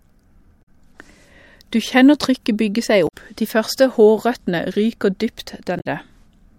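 At 0.59 to 0.69 s, 3.05 to 3.14 s and 5.76 to 5.86 s the speech breaks into a short chirp, squawk, click or hole of about a tenth of a second, the sign of damaged data in a compressed stream. Corrupted bytes make the decoder misread frames, lose sync and hunt for the next valid header. Unlike a plain dropout, which leaves silence, or a smoothed gap from loss concealment, these breaks come from the decoder losing its place in the stream.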